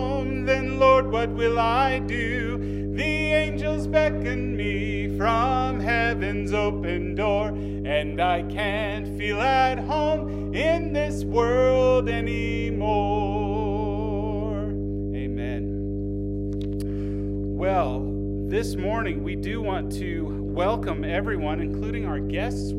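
Mains hum runs through the whole clip, a steady 50 Hz drone from power-line leakage, probably a ground loop, sitting about as loud as the audio itself.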